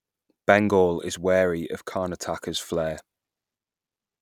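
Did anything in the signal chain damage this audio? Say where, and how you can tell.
No, nothing in the signal chain audibly damaged this speech recording, and the signal holds steady throughout without any break, distortion or interruption that would point to a faulty stage.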